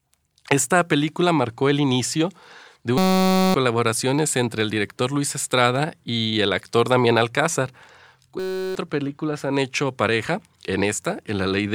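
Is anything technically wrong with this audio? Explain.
Yes. Twice, at 2.98–3.54 s (after "marcó el inicio de") and 8.40–8.75 s (before "películas han hecho pareja"), a system hang loop replays the same 5.33 ms of audio, which fits a 256-sample buffer. It produces a steady 188 Hz buzz rather than silence or stutter, and about half a second and 0.4 s of speech are lost.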